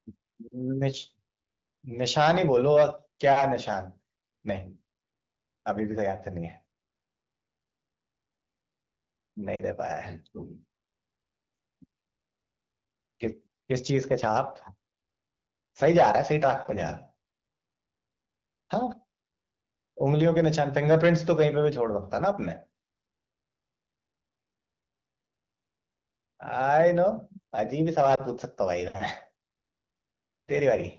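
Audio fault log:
9.55–9.62 s lost AMR speech frames: a short drop to near silence in the speech, fitting about 40 ms of missing data, as the decoder repeated its last pitch and vocal tract settings at falling gain.
28.15–28.21 s lost AMR speech frames: a brief dip and wobble, consistent with one 20 ms frame, patched by the decoder re-using the previous frame's settings at reduced level.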